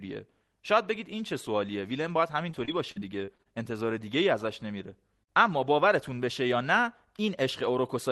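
Speech over an Opus call path, band-limited to about 12 kHz, with repeated packet loss (robotic sound) from 2.51 to 3.47 s: seven gaps, the longest 39 ms, are concealed by extending prior audio, producing choppy stretches with pieces missing.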